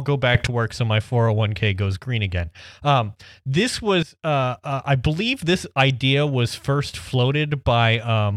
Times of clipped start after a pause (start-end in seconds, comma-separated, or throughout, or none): none